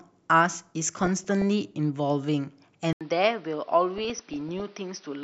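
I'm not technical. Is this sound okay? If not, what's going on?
No. Two problems can be heard.

DAB burbling appears from 1.01 to 1.42 s and again, longer and heavier, from 3.98 to 4.61 s. A weak digital radio signal let corrupted data through, so parts of the sound jump in level and give a bubbling, chirping texture.

At 2.93 s there is a short gap of 80 ms. From then to the end the sound is duller, slightly quieter and carries a faint new background hiss, with nothing above 6 kHz. The likely cause is an input switched to a poorer device partway through the recording.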